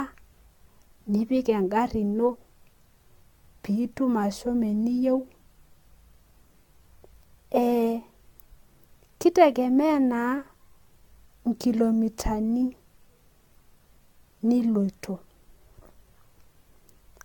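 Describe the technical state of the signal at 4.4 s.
At 4.4 s the speech carries generation loss, present across the whole clip rather than at that moment alone. The likely cause is repeated AAC-LC decoding and re-encoding, around seven passes at a rate that fits 96 kbit/s, each quantising on a shifted frame grid so the errors pile up. It sounds swirly, hollow and smeared, with blunted consonant attacks. A spectrogram shows a hard ceiling at 17 kHz and patchy holes below, and waveform onsets look softened.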